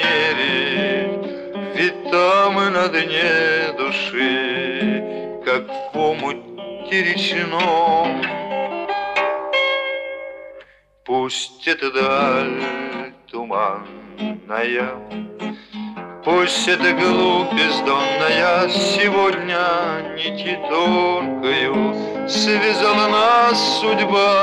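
Nothing in this audio stands out as a technical fault; there are no problems to flag anywhere along the way.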